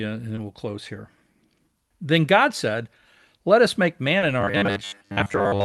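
At 0.35–0.39 s and again at 4.19–4.23 s there is short concealed packet loss: about 20 ms never arrived, and the decoder continued the previous sound, leaving a brief smear visible as blurred harmonics. From 4.41 s to the end, the robotic sound from repeated short buffers takes over: most of the audio becomes a rigid 100 Hz buzz, likely from a 10 ms chunk being looped. On a spectrogram it appears as a fixed comb of lines 100 Hz apart, and on a waveform as a roughly repeating shape.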